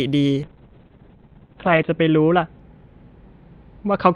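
From 0.48 s to the end, a call bitrate drop pushes the encoder from 64 kbps down to 7 kbps for about 1.4 s. Bandwidth shrinks from 20 kHz to 4 kHz, so speech turns muffled and watery. Unlike packet loss, there are no gaps or glitches, just coarser coding.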